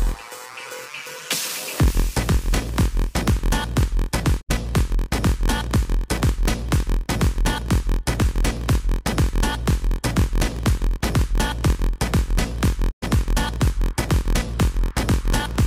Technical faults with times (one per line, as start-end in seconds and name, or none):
0.00-15.66 block size mismatch (padded)
4.40-4.51 digital broadcast dropout
12.90-13.04 digital broadcast dropout